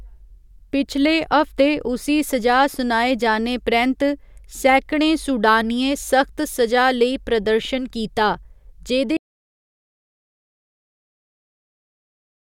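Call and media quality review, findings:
Audio dropout to silence, 9.17 s to end of clip. Speech cuts off mid-flow, then silence, no room tone. Waveform flat line, spectrogram fully black. Likely input lost (device disconnect, link failure or mute) while recorder kept writing silence; content after 9.17 s unrecoverable.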